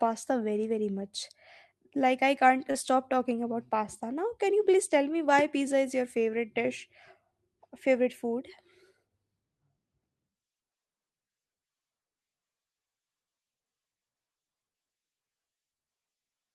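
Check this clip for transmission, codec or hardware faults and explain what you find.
One transmission fault stands out in this speech clip. A short stall from a late packet occurs at 2.71 to 2.77 s. A packet missed its slot, the jitter buffer emptied, and the receiver stretched the last sound by about 29 ms until the packet arrived. Nothing is lost, but that sound is held slightly too long, with a faint buzz or dip, and everything after it runs about 29 ms later.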